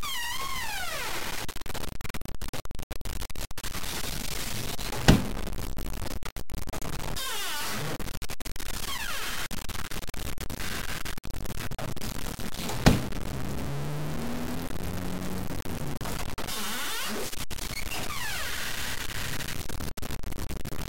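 From start to finish the audio carries a grainy, buzzing distortion that shifts with the sound itself, with quiet stretches sputtering or dropping out. Likely cause is low bit depth without dither: around 5 bits, truncated, leaving error only a few decibels below the signal.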